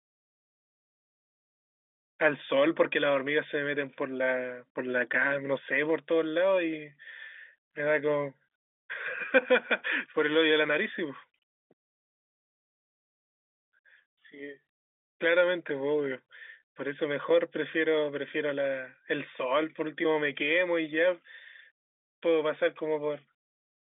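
There are no technical faults to describe in time order; the speech comes over an ordinary G.711 telephone line with nothing above about 3.8 kHz, and nothing goes wrong at any point.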